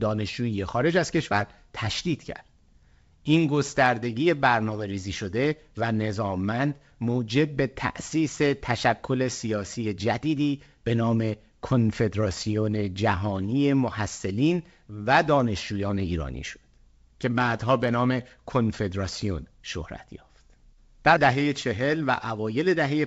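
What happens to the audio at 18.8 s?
Nothing goes wrong at 18.8 s: the speech carries on intact through the G.722 wideband telephone coding, with no dropout, click or distortion at that point.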